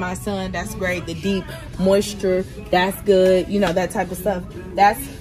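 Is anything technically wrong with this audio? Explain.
No, nothing technically wrong can be heard here.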